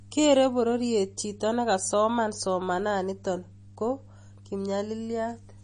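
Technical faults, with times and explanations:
Throughout, MP3 compression: the speech has nothing above 9.8 kHz and a plainly audible watery, swirling quality, likely from an MP3 encoder short of bits, which fits a low bitrate of about 32 kbps, cutting the treble and switching weak frequency lines on and off between frames.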